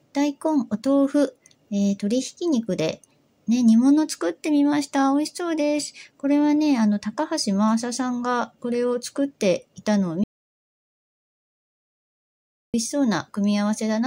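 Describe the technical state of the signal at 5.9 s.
At 5.9 s the signal is intact, with no dropout, distortion, glitch or other technical fault audible at that moment.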